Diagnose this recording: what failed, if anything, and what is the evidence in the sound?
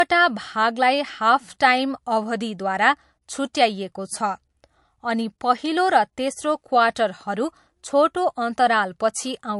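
Codec stage. Nothing above 11.3 kHz throughout the speech. Likely low-bitrate audio saved at a high bitrate: the MP3 re-encode cannot restore the lost band.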